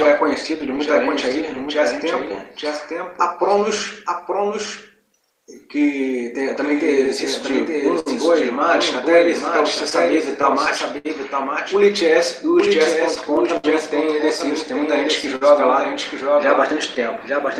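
Throughout the clip a doubled audio track is present: a full-band copy trails the original by about 0.7 s at roughly 5 dB lower, most likely from a second capture path or misaligned edit. On a spectrogram every pattern reappears shifted right, with no smeared decay.

Clock drift between sender and receiver also runs the whole length: the sender's clock is a few percent slow, so the receiver's buffer keeps draining. Playback settles around 98% speed, and the waveform shows uneven, small stretches rather than one clean shift.

From 0.03 to 1.35 s come scattered short gaps, around four tiny holes of a few milliseconds each, patched by continuing the previous sound. They sound like brief ticks or smears; a spectrogram shows thin vertical seams where harmonics briefly flatten.

Repeated timing corrections span 0.11 to 17.38 s, all repeating short pieces and adding roughly 0.4 s overall. Each edit is slight, heard as a barely unsteady tempo, and in the waveform as occasional duplicated cycles at irregular spacing.

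Repeated stalls (stutter) occur at 7.06 to 8.08 s (three gaps, longest 63 ms), 9.75 to 11.07 s (five gaps, longest 69 ms) and 13.15 to 13.66 s (three gaps, longest 67 ms). The buffer ran dry, so the last sound was held and faded. The result drags and stutters, with frozen, horizontally smeared spectral bands.

At 15.36 to 15.43 s a short stall from a late packet holds the sound for 54 ms before resuming. It is heard as a brief sustained buzz or dip, and appears as a short flat plateau in the spectrogram.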